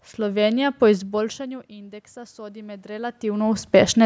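Speech, with automatic gain rising from 1.16 to 3.27 s. Around 1 s the talker moves away and the input drops by about 21 dB. The gain control responds slowly, lifting the level by about 5 dB. Voice and room noise swell together.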